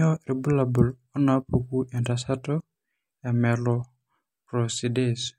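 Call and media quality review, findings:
No audible faults found; speech clip reviewed, nothing to raise against any component.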